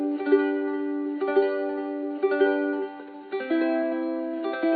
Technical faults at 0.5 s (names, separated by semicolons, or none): none